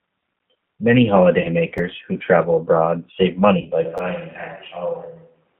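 Throughout, the G.729 codec narrows the speech to roughly 150 Hz–3.4 kHz and adds a rough, synthetic grain, which separates it from a clean telephone band-limit. From 1.41 to 1.49 s, VoIP packet loss concealed by the speech codec covers about 30 ms. The decoder stretches the last sound into a fading buzzy tone or coloured noise that stays weak briefly afterwards. At 1.78 s a repeated buffer replays one 10.7 ms chunk, which fits a 512-sample buffer. It makes a hard-edged click rather than a fade. Concealment returns from 3.61 to 3.69 s over about 40 ms, and a second repeated-buffer click follows at 3.98 s.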